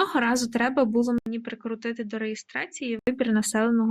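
Input switched to a poorer device, from 1.18 s to 3.07 s, just after "разу треба було": an 80 ms gap opens, then the speech returns duller and somewhat quieter, with nothing above 7.6 kHz and faint new background noise well beneath it. The likely cause is the recording input jumping to a different, narrower-band microphone mid-take. At 3.07 s the brighter, fuller original sound comes back.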